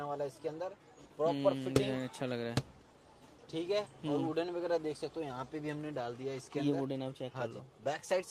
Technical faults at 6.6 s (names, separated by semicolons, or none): none